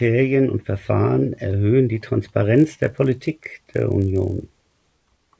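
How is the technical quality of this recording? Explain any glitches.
The recording has one clear fault: from 2.56 s, just after "erhöhen die", to the end of the speech, a resampler restarted on every block adds a steady buzz. Each 20 ms block was converted on its own, which fits a 24 kHz to 16 kHz conversion, so every block edge carries a small error. These errors repeat at 50 Hz and fuse into a rough buzz. Unlike mains hum at the same rate, it vanishes in pauses and appears only while there is sound.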